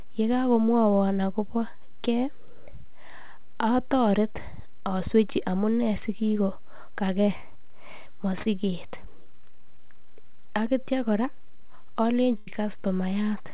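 Around 7.37 to 7.43 s, 8.42 to 8.48 s and 9.23 to 9.29 s there's short concealed packet loss. Each time about 30 ms of the speech never arrived, and the receiver patched the hole by stretching the last sound for 22 to 33 ms before blending back. You hear a quick smear or wobble.

Then at 12.38 to 12.50 s comes a burst of packet loss. Roughly 90 ms went missing, and the receiver kept extending the last sound while fading it out, giving a held buzz or dying hiss before the speech picks up again further along. The whole clip has nothing above 4 kHz, which fits a G.711 A-law call at 64 kbps.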